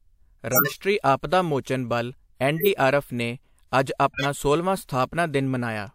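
Damaged compressed frames were decoded anyway (corrupt frame decoded), throwing energy to wrong frequencies: loud chirping bursts at 0.52–0.80 s, then shorter, quieter blips at 2.57–2.68 s and 4.13–4.26 s.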